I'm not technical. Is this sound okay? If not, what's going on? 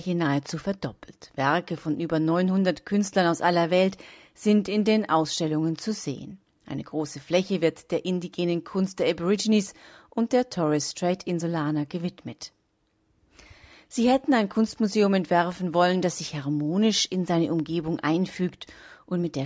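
Yes, nothing is wrong with this recording. It went through the normal microphone processing of a call, which is why nothing above 8 kHz is present.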